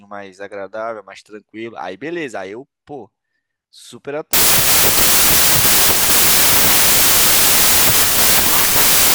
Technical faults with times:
4.33-9.14 wrong sample width

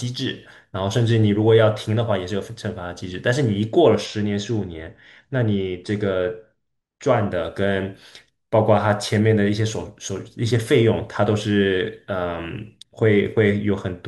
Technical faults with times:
4.06-7.32 channel delay (comb filtering)

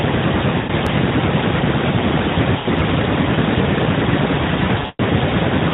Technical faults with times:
0.58-0.72 lost AMR speech frames
0.87 dropped buffer (overrun)
2.57-2.67 lost AMR speech frames
4.79-5.00 lost AMR speech frames

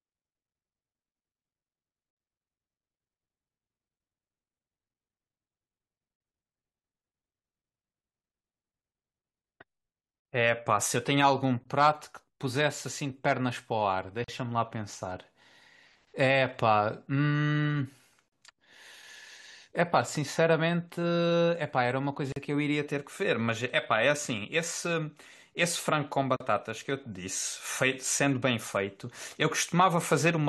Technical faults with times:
14.24-14.28 gap at a join of encoded pieces
18.28-18.32 gap at a join of encoded pieces
22.32-22.36 gap at a join of encoded pieces
26.36-26.40 gap at a join of encoded pieces

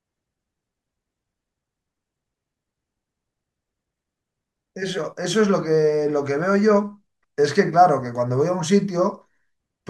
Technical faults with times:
none

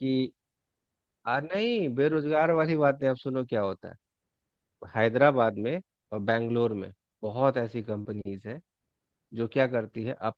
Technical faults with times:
1.49-1.55 lost packet rebuilt from error correction
2.51-2.57 lost packet rebuilt from error correction
6.47-6.49 lost packet rebuilt from error correction
8.01-8.07 short concealed packet loss
8.05-8.15 lost packet rebuilt from error correction

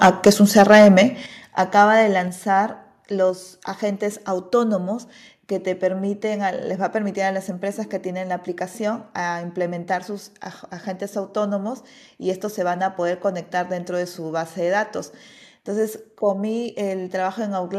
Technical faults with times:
0.01-0.30 microphone overload
0.27 microphone volume stepped down
0.57-0.99 microphone overload
1.26 microphone volume stepped down
2.28 microphone volume stepped down
3.30 microphone volume stepped down

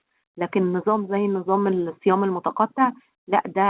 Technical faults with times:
0.22-3.70 automatic gain rising

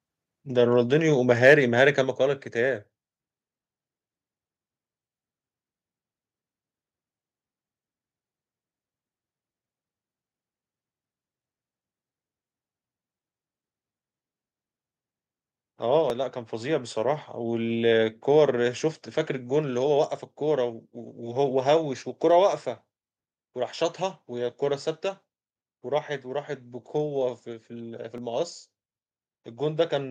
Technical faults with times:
1.30-1.54 microphone overload
2.04 microphone volume stepped down
16.10 dropped buffer (overrun)
28.18 dropped buffer (overrun)

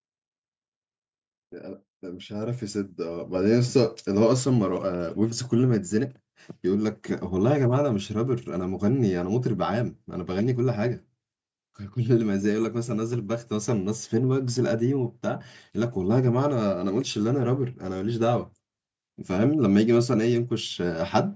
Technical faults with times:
2.00-5.51 automatic gain rising

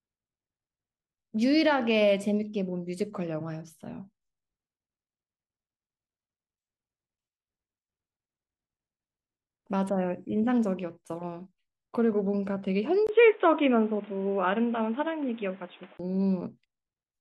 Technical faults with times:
13.07-15.99 input switched to a poorer device

